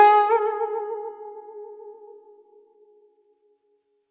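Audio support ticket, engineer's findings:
Listened to the full music clip and nothing stood out.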